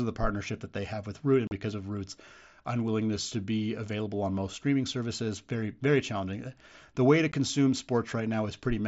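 Unconcealed Bluetooth headset packet loss leaves abrupt silent holes at 1.47–1.51 s, before "because of", and 7.32 s, after "way to": dropped headset-link packets left unfilled.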